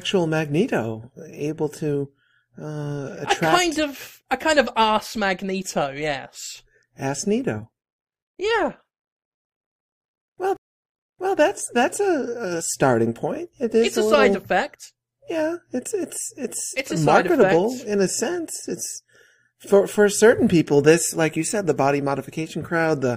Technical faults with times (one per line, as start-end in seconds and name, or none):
10.57-11.38 stream reconnect